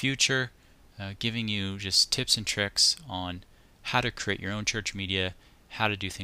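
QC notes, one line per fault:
1.94 s, repeated buffer: a 1.45 ms slice played twice more with hard joins, so it comes across as a click, which fits a 64-sample buffer.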